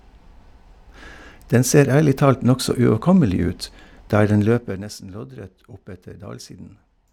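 A gain change was applied in coarse steps with no smoothing, producing zipper noise from 4.38 to 4.90 s. As the level drops by about 15 dB over that half second, it moves in a staircase of roughly 70 jumps per second rather than a continuous ramp, and each jump leaves a tiny click in the speech. Together the clicks form a fast ticking, zipping texture laid over the voice while the fade is under way.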